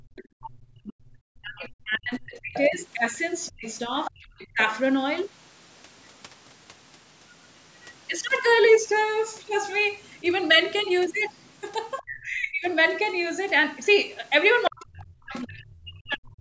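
A speech clip recorded through a call's microphone processing, whose band stops at 8 kHz, with three echo canceller faults. At the very start the canceller gated the background while the loudspeaker was playing: from 0.00 to 0.08 s it pulled the microphone down by about 24 dB, so the room sound dips out for around 70 ms and returns once the canceller releases. Next, the canceller likely failed to remove the far end's audio from the microphone, so the other side's voice leaks through at 0.16 to 0.28 s (roughly 25 dB below the talker), 2.42 to 4.64 s and 14.66 to 15.35 s (both roughly 15 dB down), and 10.03 to 12.18 s (roughly 20 dB down). It comes through as a second, quieter voice under the main one. Finally, with both sides talking at once, the canceller likely could not tell its own talker from the loudspeaker echo and turned everything down, so speech is suppressed in double talk. From 0.36 to 4.6 s the talker's voice drops by as much as roughly 40 dB, for about three seconds in total. 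From 12.01 to 12.66 s it dips by around 30 dB for about half a second. From 14.68 to 16.38 s it drops by roughly 40 dB for about a second and a half, fading or cutting out in pieces.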